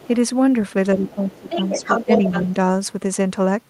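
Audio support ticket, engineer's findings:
Other side's voice leaking through. Faint far-end fragment at 0.0–0.08 s, about 25 dB under the talker. Another scrap at 1.06–1.12 s, about 20 dB down. Then 1.35–2.52 s, far end roughly as loud as the talker. Likely component: echo canceller. Loudspeaker output reaching the mic is not fully subtracted, so the residual passes upstream.

Speech suppressed in double talk. Talker dips at 0.95–1.86 s, deepest drop about 20 dB, about half a second affected in pieces. Again at 2.06–2.24 s, about 10 dB, brief. Both overlap the far-end leak. Likely cause: echo canceller suppression engaging during simultaneous talk and attenuating near-end speech along with the echo.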